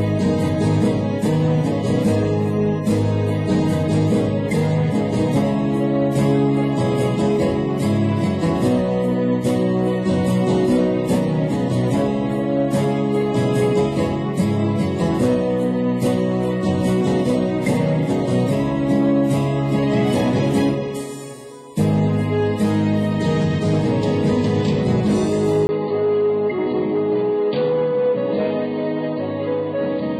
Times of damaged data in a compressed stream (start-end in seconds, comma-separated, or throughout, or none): none